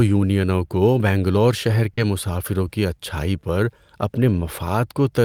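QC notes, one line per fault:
1.93–1.99 s, short concealed packet loss: 40 ms of speech never reached the decoder after "یونینوں کو بنگلور شہر". The receiver stretched the previous sound, giving a brief smear before "مسافروں کی اچھائی پر".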